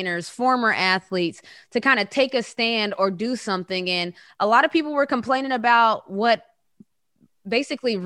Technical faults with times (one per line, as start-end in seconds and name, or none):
0.00-8.05 resampler restarted on every block